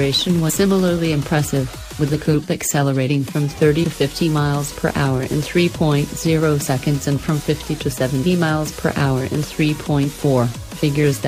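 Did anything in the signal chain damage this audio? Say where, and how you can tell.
Yes, at the codec stage, from compressed frames skipped at 0.49 s and 3.83 s. Each spot jumps ahead by about 100 ms, roughly four frames of 26.1 ms, and leaves a brief smeared blip, not a click, because overlapping neighbouring frames blur the join.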